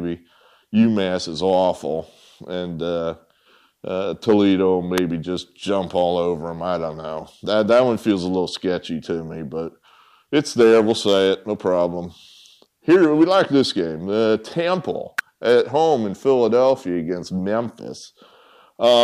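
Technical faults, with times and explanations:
4.98 s and 15.19 s: electrical switching spike. Each is a sharp snap of only a few milliseconds, sitting on top of the sound rather than replacing it. The first is the louder of the two. The second is a little quieter, a few decibels below. The likely cause is a nearby switch, motor or static discharge arcing briefly. The audio line picks up that burst of interference, so it lands as an abrupt click.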